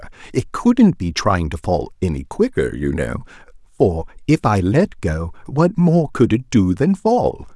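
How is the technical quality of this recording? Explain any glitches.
Nothing stood out on listening; the speech comes across without any audible glitches to explain.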